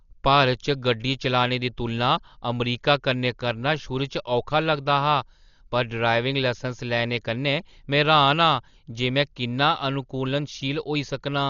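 Throughout, the speech sounds dull, with nothing above about 6.9 kHz, and a rough, fluttering noise sits around voiced tones. The likely cause is heavy Dolby Digital compression at a very low bitrate. Starved frequency lines are refilled with dither noise, giving a hiss-like roughness rather than a metallic warble.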